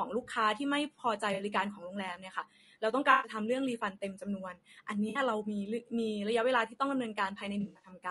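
The speech sounds rough and grainy all the way through, with noise between the harmonics and a thin top band. That's most likely low-delay AAC compression at around 32 kbps.

Then there's AAC frame loss with concealment. At 1.33, 3.11 and 5.09 s, the decoder patches over missing data, leaving smeared, noisy blurs of about 60, 120 and 60 ms. From 7.61 to 7.90 s, the losses are scattered, and the longest gap is about 70 ms.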